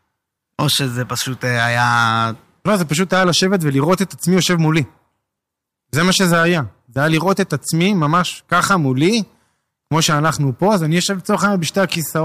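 Hard clipping runs through the whole speech clip: it's pushed about 5 dB too hot, so roughly one percent of samples get sliced flat, giving crackle on louder moments.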